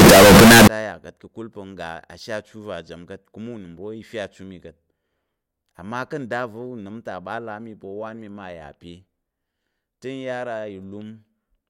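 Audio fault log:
0.00–0.67 s, signed and unsigned mixed up: the opening speech bursts into very loud, harsh distortion, quiet moments as loud as the rest, until "te a yà ka̱t". Likely 16-bit samples read with the wrong sign convention, flipping the top bit so each zero crossing jumps across the full range.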